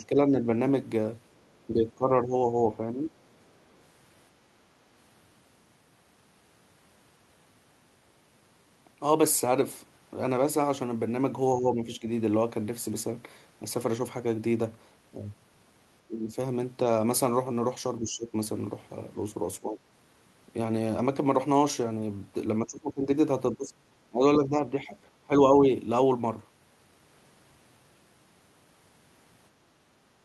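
Speech, with repeated level dips from 0.0 to 0.35, 1.67 to 3.1, 11.57 to 12.05, 16.07 to 16.36, 18.0 to 18.34, 19.6 to 19.81 and 22.63 to 25.7 s. The voice sinks by about 5 to 15 dB, sometimes in broken pieces. This is likely speech suppressed in double talk, where an echo canceller ducks the talker while the far side also speaks.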